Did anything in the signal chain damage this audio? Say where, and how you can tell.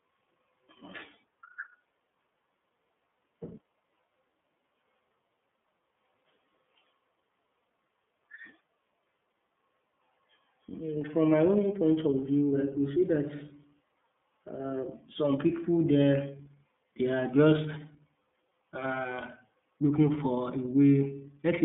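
Yes, at the codec stage: the iLBC codec affects the whole clip. A spectrogram shows speech held within 150 Hz to 3.5 kHz and nothing above 3.7 kHz. Each 30 ms frame is coded on its own, leaving plainly rough, synthetic speech that fits the 13.33 kbps mode.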